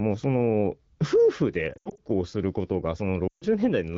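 At 1.74 to 2.00 s, lost AMR speech frames break up the speech. About 140 ms of audio is missing, scattered, with the longest gap 80 ms. The wideband decoder reuses the last sound and drops it to near silence within two frames. At 3.27 to 3.45 s, another 140 ms drops out the same way.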